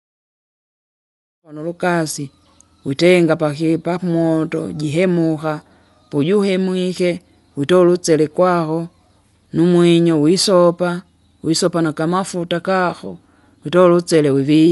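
Speech that fades in smoothly from around 1.5 s, reaching full level by 1.91 s, and carries plainly audible codec damage throughout that is likely Dolby Digital compression. Nothing is present above 11.5 kHz, and a rough, fluttering noise clings around tonal parts, which fits a low bitrate near 64 kbps. That texture sets it apart from a simple low-pass filter: the encoder has starved many frequency lines of bits, and the decoder fills them with dither noise rather than leaving clean silence.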